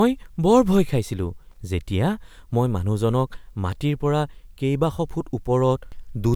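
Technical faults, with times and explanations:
1.51 to 1.57 s, loose connector crackle: for about 50 ms the speech is chopped by a contact that repeatedly makes and breaks, leaving a brief, irregular scratching burst. Any DC present on the line at the contact turns each break into a pop.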